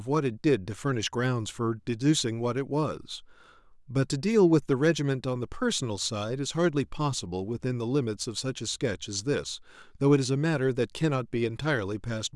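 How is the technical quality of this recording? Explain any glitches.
Nothing here sounds off at all: the speech comes across without any glitches to point to.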